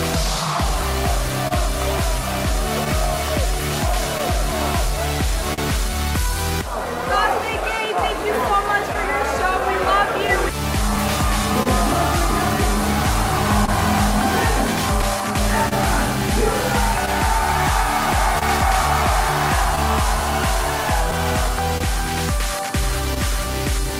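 Right from the start there's clock drift between sender and receiver, running the whole way through. The sending side's clock is roughly one and a half percent slow, so the receiver's jitter buffer keeps draining, and the receiver has to stretch things by repeating little slices of audio to keep up. You hear it as small timing hiccups that keep recurring at uneven intervals, never settling into a steady rhythm.

On top of that there are scattered short gaps in three stretches. From 0.81 to 5.60 s there are about seven, the longest around 40 ms. From 8.93 to 11.68 s there are about five, and from 13.66 to 23.18 s about ten, the longest in both of those around 30 ms. Each one is a lost or late packet that the receiver papered over by carrying the last bit of sound forward, so they come across as brief ticks and smears. Only a couple of percent of each stretch is patched, and the audio between the gaps is clear.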